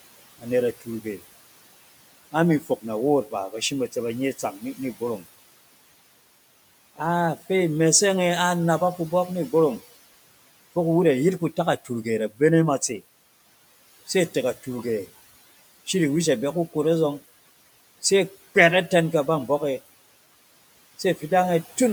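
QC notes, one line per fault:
Throughout: noise suppressor artifacts. The background sits about 20 dB below the speech, and the suppressor pulls it down by about 17 dB. It works band by band, frame by frame. So the noise sinks in the gaps and comes back up under the speech.
2.61 to 2.84 s: speech cut by the noise suppressor. Just before "nawoot ba ba shim", part of the speech is mistaken for noise and turned down with the background. The deepest drop is about 10 dB. Around a tenth of a second of sound is affected in total. That portion sounds swallowed and faint. The soft detail is turned down before the level comes back for the next words.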